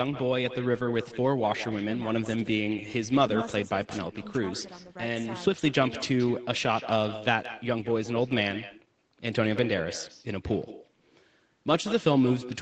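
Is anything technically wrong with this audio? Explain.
Yes. An echo with no canceller runs through the whole recording. The far end is playing the call over a loudspeaker, its microphone picks that playback up, and nothing subtracts it before it travels back. Every phrase is followed, after a round-trip delay of roughly 150 ms, by a second copy about 15 dB quieter. That copy sounds thinner than the direct speech, so the talker seems to be trailed by their own faint, hollow shadow.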